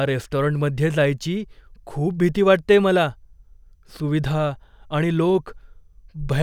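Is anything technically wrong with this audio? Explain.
No technical faults are audible.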